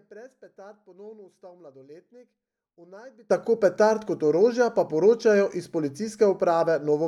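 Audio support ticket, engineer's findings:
Likely cause: one channel inverted, polarity reversed on one stereo leg ahead of a mono fold-down. Shared centre content cancels, so speech collapses by about 25 dB to a faint residue, 0.0 to 3.3 s. Full level returns at "tako petard kot orožja".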